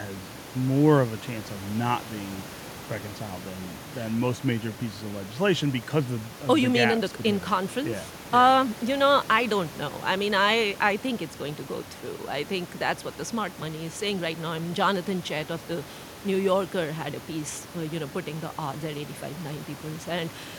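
No technical faults can be heard in this speech recording. The room noise of the recording space stays in the background, about 15 dB below the speech.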